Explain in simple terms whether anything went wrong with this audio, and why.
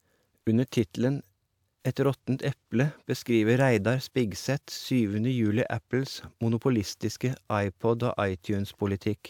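Nothing went wrong here.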